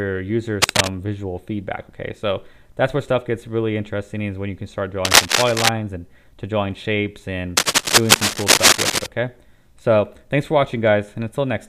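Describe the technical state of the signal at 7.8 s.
A worn cable, connector or control is likely being moved here, so its contact resistance jumps around rapidly and injects ragged bursts of noise into the path. At 7.8 s the signal sits inside a stretch of cable scratch noise running from about 7.57 s to 9.06 s. It is heard as dense, uneven scratching and rustling laid over the sound, and it is somewhat louder than the sound itself.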